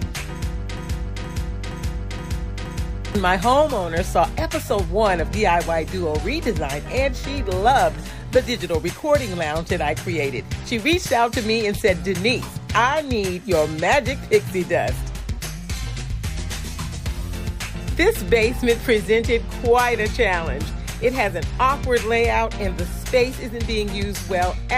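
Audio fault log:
0.77–3.15 s, broken-record loop: right near the start, a fragment of about 0.47 s repeats exactly, five times back to back, so for a bit over two seconds the sound stutters in place like a stuck record before moving on. Whatever should have played in that stretch is simply gone. Most likely the player or stream stalled and kept re-sending the last piece it held until fresh audio arrived.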